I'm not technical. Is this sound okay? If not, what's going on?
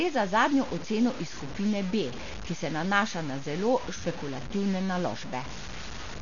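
No. From start to finish, the speech has a gritty, sandy roughness that clings to the voice and changes as it does. The quietest moments, like the trailing ends of sounds and the pauses, break up into a sputter or drop to silence instead of fading smoothly. This is low bit depth without dither: the audio was stored with very few loudness steps, consistent with about 5 bits, and likely chopped down to the step below with no smoothing noise to hide the rounding.

The speech also sounds dull and muffled all the way through, as if heard through a cloth, because nothing above about 6.9 kHz is left. Around the voice there is a rough, fluttering noise. That points to heavy Dolby Digital compression, the format often used for TV and film sound. Squeezed too hard, the encoder likely cut off the upper range and dropped many fine details, and the player filled those gaps with noise.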